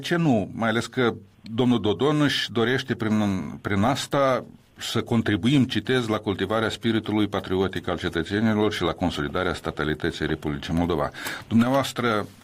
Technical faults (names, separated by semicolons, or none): none